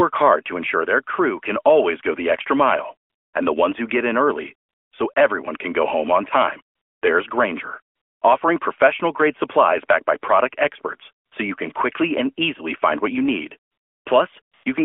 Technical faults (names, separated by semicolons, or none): AMR comfort noise